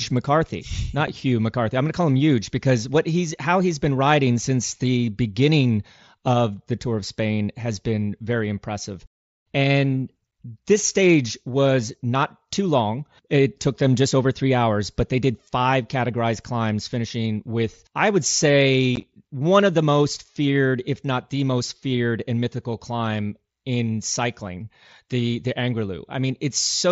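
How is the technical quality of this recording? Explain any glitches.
The recording has two dropouts from unconcealed Bluetooth headset packet loss, heard through the wideband mSBC headset link, which limits the sound to 8 kHz. At 1.07 s a single gap of about 7.5 ms, consistent with one lost packet, cuts the sound abruptly. From 18.96 to 19.03 s several short holes totalling 30 ms are spread across 75 ms, the longest 15 ms, giving a brief chopped crackle. No concealment fills the missing packets, so silence or an idle pattern replaces them. A waveform shows flat gaps with sheer edges, and a spectrogram shows thin blank vertical slits with broadband click lines at their boundaries.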